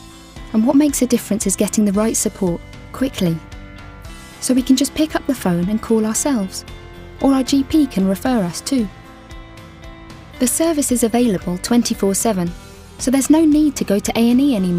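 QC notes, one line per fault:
Nothing here needs flagging, so this one can go through as is.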